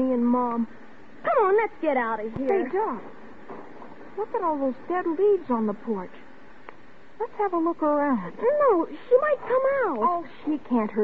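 A loud pop, in fact two quick pops, hits at 2.36 to 2.52 s. They peak a few decibels above the sound, which continues underneath. The likely cause is a voltage spike from a plug, switch or static.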